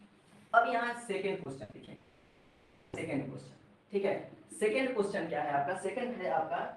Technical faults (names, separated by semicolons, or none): repeated packet loss (robotic sound); long network dropout